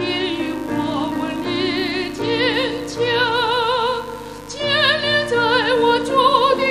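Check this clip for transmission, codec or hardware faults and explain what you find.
One fault runs through the whole clip: mains buzz. Interference from a dimmer, rectifier or unshielded run injects sharp switching spikes twice per 50 Hz cycle, spraying harmonics up into the kilohertz range. The result is a steady, raspy buzz sitting only around 20 dB below the sound.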